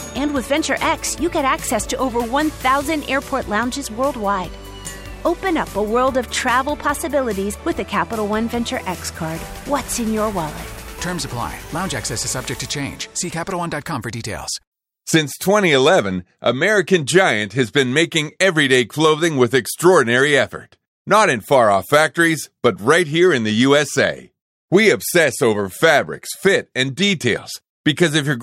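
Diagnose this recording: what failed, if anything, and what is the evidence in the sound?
Nothing in the chain failed: there's no audible dropout, distortion, or glitch at any stage from capture to playback.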